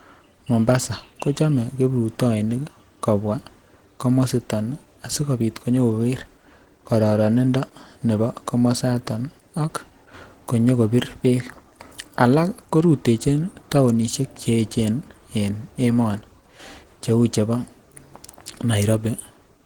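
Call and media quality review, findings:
Opus compression throughout. Speech plainly hoarse, grainy, muffled; spectrum still reaches about 20.2 kHz. Likely Opus hybrid speech mode at a low rate, consistent with about 16 kbps.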